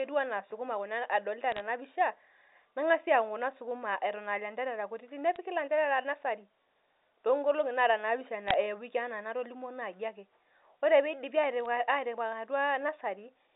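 Bit errors on a digital phone line corrupt scattered samples in this speech recording, at a rate of roughly 0.1 to 0.2 percent. Each flipped bit jolts one sample, so sharp ticks and brief crackle cut across the narrow 300 Hz to 3.7 kHz telephone band at 1.52–1.6 s, 5.36 s, 8.48–8.54 s and 11.65 s.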